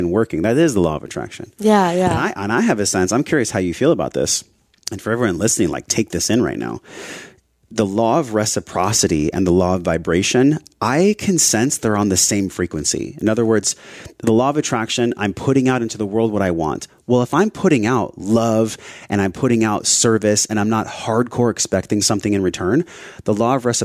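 No technical faults can be heard anywhere in the recording.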